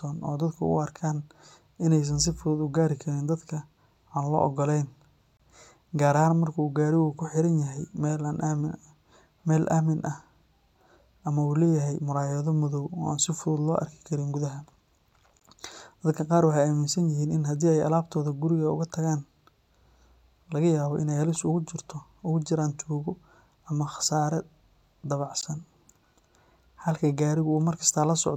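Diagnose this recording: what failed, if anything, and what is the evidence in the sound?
Codec stage, at the seams: there's a gap at a join of encoded pieces every 10 s. It runs 25 ms at 5.37–5.40 s, then 16 ms at 15.40 and 25.41 s. Each piece kept its encoder delay and end padding, so short, smeared silences cut into the speech.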